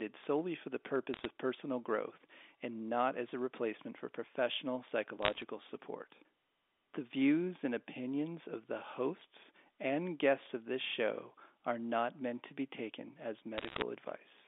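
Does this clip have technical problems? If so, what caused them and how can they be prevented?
Yes. Bit errors on a digital phone line cause bursts of crackle at 1.14–1.25 s after "solely for the", 5.22–5.42 s after "a replacement for professional", and 13.58–13.82 s after "to be taken as". The error rate is roughly half a percent or a bit more. Each flipped bit corrupts a single sample on the G.711 A-law line, and hits on sign or high-order bits become sharp ticks over intact speech. Packet loss would cause gaps or smeared dropouts instead. Preventing it means fixing the noisy digital link or adding error detection and correction on the line.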